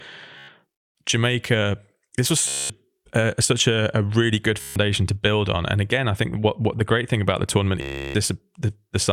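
Bluetooth stutter occurs four times in this speech: 0.38 to 0.48 s, 2.48 to 2.70 s, 4.61 to 4.76 s, and 7.81 to 8.15 s, lasting roughly 0.10, 0.22, 0.15 and 0.33 s. Each time, packets failed to arrive, so the receiver kept replaying its last short buffer, producing a buzzing, machine-gun repeat. The speech then picks up further along, the missing stretch skipped. The longest gap, near 8 s, points to a sustained run of dropped packets.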